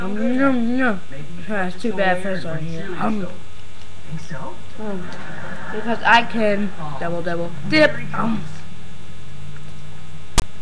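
At 10.38 s, lasting about 40 ms until 10.42 s, file tags are played as audio. A block of text metadata was read as samples. It gives a hard-edged burst of loud rasp, offset to one side. Then the zero padding drops to silence.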